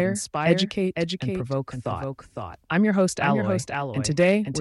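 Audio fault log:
Throughout: doubled audio track, a second full-band copy trailing about half a second behind at roughly 5 dB down, with no decay, likely a second capture path.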